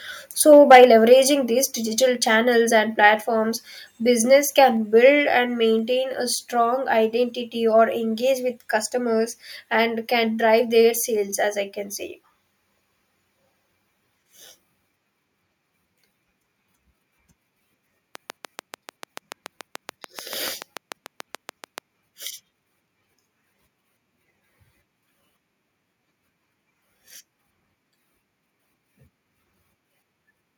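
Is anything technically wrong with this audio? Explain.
Yes, there are three problems. From 0.52 to 0.85 s there is microphone overload. The loudest syllables turn harsh and crackly because the peaks run about 6 dB past the converter's limit and their tops are sheared flat, roughly one sample in twenty. The likely cause is an input volume set too high at the converter. It differs from a codec or loudspeaker distortion because it follows the signal peaks exactly and disappears on quieter sound.

The microphone volume is stepped down four times: about 2 dB at 0.72 s, 3 dB at 1.71 s, 2 dB at 4.77 s and 1 dB at 5.79 s. Each drop is instantaneous and affects both the speech and the background together. That points to a lowered device input gain, likely the call software reacting to the overload. A compressor or automatic gain control would instead glide between levels and recover afterwards.

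From 18.15 to 21.79 s there is a train of clicks: around thirty nearly identical ticks at a steady 6.9 per second, standing about 15 dB above the speech and continuing through the pauses. The likely cause is interference from nearby equipment or a faulty connection or power supply injecting pulses. Their fixed rhythm and constant shape distinguish them from random dropouts or mouth noises.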